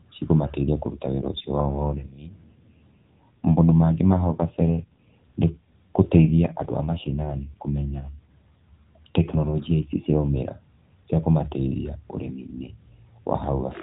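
Right after "cikũmateithia kũruta", from 1.12 to 5.10 s and again from 6.22 to 8.34 s, the speech turns rougher and buzzier without losing bandwidth or breaking up: an AMR rate drop, the sound fitting a fall from 12.2 to 5.9 kbps while the link weakened.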